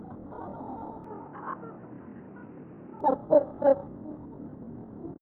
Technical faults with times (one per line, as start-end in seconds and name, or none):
1.04-3.01 input switched to a poorer device